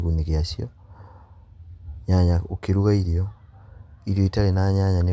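No technical faults are audible.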